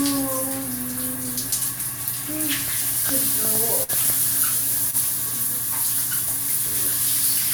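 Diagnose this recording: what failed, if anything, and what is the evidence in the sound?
The failure is in the network. At 3.83 s a burst of packet loss interrupts the audio until about 3.91 s. The receiver had nothing to play for roughly 51 ms, so it extended the last sound it held and let it fade, which gives a held buzz or decaying hiss in place of real content. When real packets resume, about 40 ms of the original audio has been skipped.

A second, smaller network fault follows at 4.91 s, ending near 4.95 s: a short concealed packet loss. Here the decoder was short of data for about 23 ms and bridged the hole with a synthetic continuation of the preceding sound, then crossfaded back into the received stream. The result is a brief smear or wobble rather than an obvious dropout, with about 20 ms of the original sound absent.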